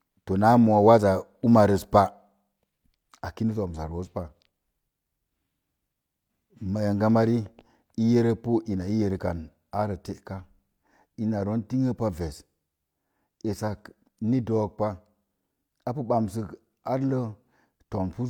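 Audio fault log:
No faults heard.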